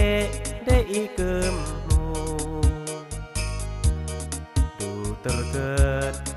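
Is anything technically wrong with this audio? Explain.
No, nothing technically wrong can be heard in this audio, and the signal comes across as intact throughout.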